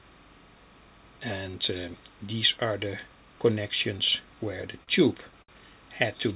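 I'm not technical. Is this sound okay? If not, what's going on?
No. Timecode bleed, throughout: a faint, steady chirping warble alternating near 1 and 2 kHz, from a timecode signal running at 30 frames per second leaking in from a neighbouring cable or track.

Short stall from a late packet, at 4.83–4.89 s and 5.42–5.50 s: a piece of audio arrived late over the call, so the last sound was stretched for about 40 ms and then 60 ms. Nothing is missing, but the sound briefly hangs. The call link itself also cuts everything above 4 kHz, giving a telephone-like dullness.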